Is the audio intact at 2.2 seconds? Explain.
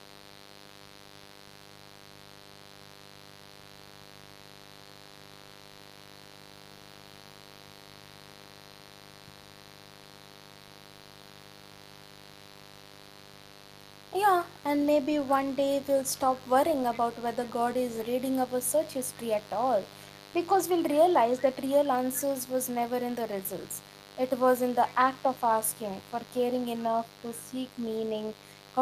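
No. A mains buzz runs through the whole recording, so it is present at 2.2 seconds too. Something in the signal path, such as a dimmer, a rectifier or an unshielded connection, is letting sharp switching spikes from the 50 Hz supply into the speech twice per cycle. The harmonics of those spikes climb into the kilohertz range, giving a steady, raspy buzz that sits roughly 20 dB below the speech.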